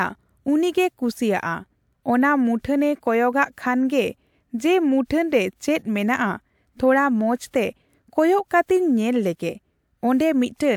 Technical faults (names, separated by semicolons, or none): none